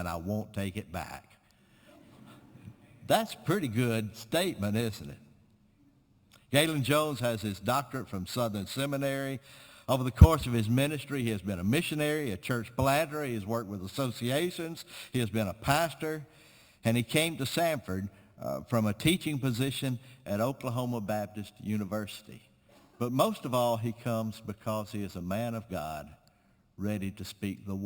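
From start to end, the sound carries imaging from sample-and-hold upsampling. Each original sample was simply repeated to raise the rate, with no smoothing filter. Mirror copies of the spectrum therefore sit above the true content. The lowest copy fills 6 to 12 kHz, about 18 dB below the signal. That fits a source at 12 kHz raised to 48 kHz. It sounds like a bright metallic fizz that rises and falls with the sound. Its pitch moves against the real pitch.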